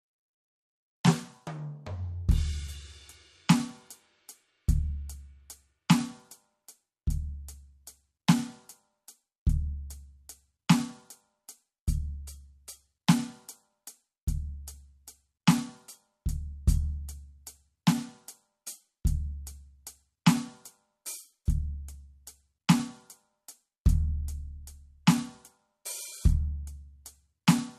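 Throughout the music, the treble stops dead at 13.2 kHz and the upper detail sounds watery and swirly, with metallic chirps on bright attacks. This is likely MP3 compression at a low rate, fitting around 48 kbps. A spectrogram shows a flat ceiling and flickering, patchy high-frequency bins.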